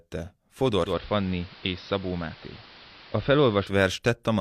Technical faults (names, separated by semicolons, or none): digital radio blending to analogue